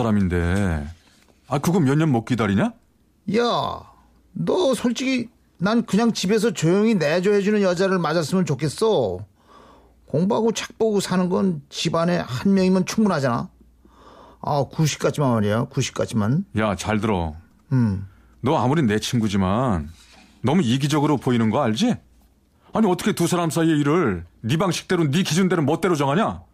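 Nothing in this speech recording stands out as a technical fault at any point.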